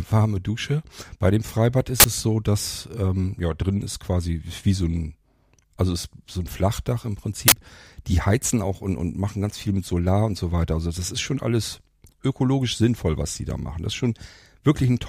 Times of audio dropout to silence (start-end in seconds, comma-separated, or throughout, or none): none